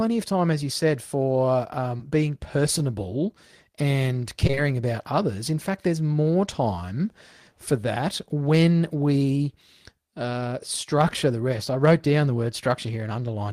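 At 1.97 to 2.01 s, after "as you said for", there is short concealed packet loss. About 20 ms of audio arrived too late to decode. The receiver patched the gap by extending the preceding sound, then blended back in. It is heard as a brief smear. A second, longer patch runs from 4.47 to 4.59 s, between "being personable and" and "about others". Three consecutive 20 ms losses make the smear there longer.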